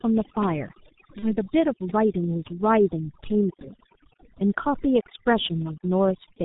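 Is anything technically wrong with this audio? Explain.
Yes, three faults are audible.

Throughout, overdone noise removal switches off bands near the noise estimate. The background drops and breaks up into twinkling specks. A spectrogram shows scattered isolated dots and patchy, holed harmonics.

Throughout, the G.723.1 codec sounds muffled and hoarse, with blurred consonants, which fits a heavily squeezed stream of about 6 kbit/s. The spectrogram shows nothing above 4 kHz and smeared, slowly changing formants.

From 1.19 to 1.37 s, VoIP packet loss concealed by the speech codec produces a buzzy tone or coloured noise that fades. This points to a single lost 30 ms frame that the decoder filled from its last pitch and filter. The speech stays weak afterward as the decoder recovers, and the waveform's envelope sags across that span.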